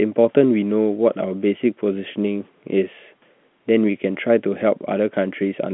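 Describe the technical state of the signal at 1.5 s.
At 1.5 s the speech is intact, heard through an ordinary telephone line band of roughly 150 Hz to 3.5 kHz with no fault present.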